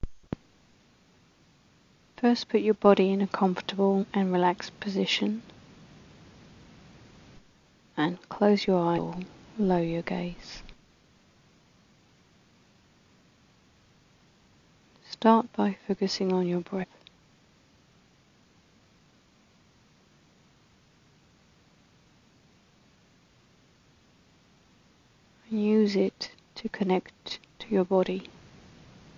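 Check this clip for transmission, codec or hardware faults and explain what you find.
The clip has one codec fault, compressed frames skipped, occurring five times: 3.99–4.05 s, 8.94–8.99 s, 16.79–16.85 s, 18.37–18.39 s and 22.38–22.42 s. Each time, a run of around seven frames is dropped, either missing or rejected by the decoder as damaged. With 42.7 ms frames, the audio jumps forward by roughly a third of a second.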